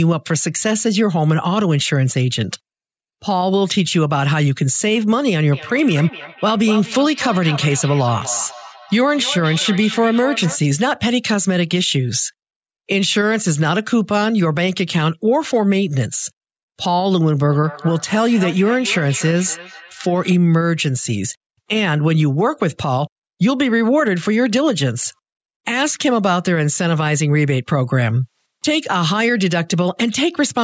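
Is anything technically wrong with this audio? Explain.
Yes. There is feedback echo between two devices, from 5.52 to 10.6 s and again from 17.48 to 20.38 s. Two devices on the same call share one room, so one plays back what the other's microphone sent, and that microphone picks it up again. Neither echo canceller removes sound it didn't play itself. The speech returns at an interval of roughly a third of a second, peaking about 13 dB and about 14 dB below the speech, with thinner, ringing repeats.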